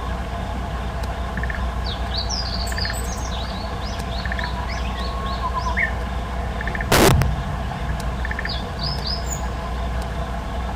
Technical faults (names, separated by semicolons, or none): integer overflow